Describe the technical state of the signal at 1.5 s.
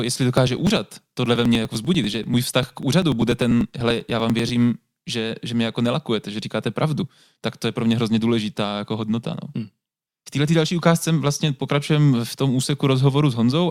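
At 1.5 s the speech is inside a run of periodic USB or driver dropouts, 0.37–4.49 s, ending just before "že že mě jako". Roughly 2 ms is skipped every 0.098 s, producing regular ticks.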